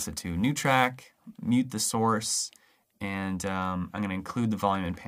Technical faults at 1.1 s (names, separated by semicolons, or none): sample clock jitter